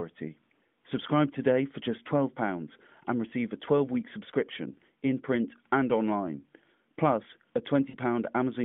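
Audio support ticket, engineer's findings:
Brief smeared warble with sagging level at 7.90–7.96 s, just after "and online plus a". Lost AMR speech frames: the decoder repeated the last good pitch and vocal tract settings with decaying gain for about 40 ms, two frames' worth. A stretched tail rather than a hard silent gap sets it apart from a plain dropout.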